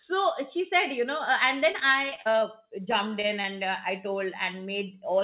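From 1.72 to 2.43 s, repeated packet loss (robotic sound) chops the speech: eight gaps, the longest 38 ms, are patched by stretching the previous sound, about 22% of the span. A milder run at 2.91 to 3.45 s, four gaps up to 20 ms, ends before "uh i". The patched-in fill sets it apart from plain dropouts.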